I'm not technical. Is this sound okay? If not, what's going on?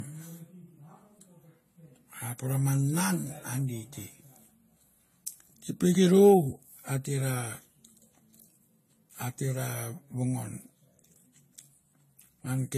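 No. The whole recording has different compression artefacts heard together, with nothing above about 14.1 kHz. This is likely transcoding between lossy codecs. The speech seems squeezed small twice, perhaps AAC then Vorbis. Each pass adds its own blur on top of the last.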